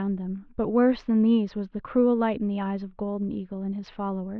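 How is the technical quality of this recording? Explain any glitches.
No audible glitches or faults.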